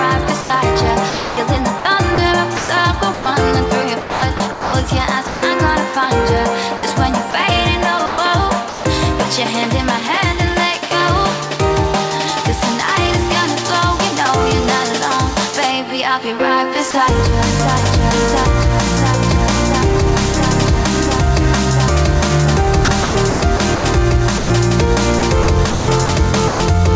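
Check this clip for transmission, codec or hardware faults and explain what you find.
Two kinds of fault appear, both pointing to the sending side's voice detector, heard over a G.722 call path at 64 kbps whose band stops at 8 kHz.

Sound chopped by the voice detector occurs from 0.41 to 5.42 s, 6.77 to 8.84 s and 22.85 to 26.60 s. Over these stretches the sound repeatedly drops out and is filled with synthetic comfort noise, about 1.29 s, 0.36 s and 0.9 s in total respectively. The likely cause is a detector toggling transmission on and off several times. The multiple holes within each stretch set this apart from a single drop.

Sound dropped by the voice detector occurs once, from 16.91 to 16.94 s. For 30 ms the sound is lost and replaced by comfort noise, with the likely cause being the detector briefly mistaking the sound for background and pausing transmission. It is a single, short gap, unlike the repeated chopping elsewhere, and the steady generated noise fill distinguishes it from a packet-loss glitch.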